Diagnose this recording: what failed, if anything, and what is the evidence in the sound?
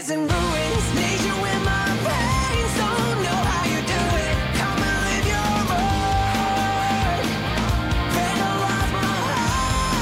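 Nothing failed: no stage of the chain, from capture through conversion, transport and playback, leaves any audible sign of a fault anywhere in the recording.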